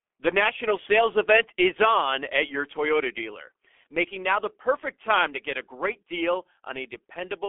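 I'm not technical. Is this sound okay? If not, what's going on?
No. The speech went through the G.723.1 codec the whole way through, so it sounds muffled and hoarse, with nothing above about 3.5 kHz and smeared consonants.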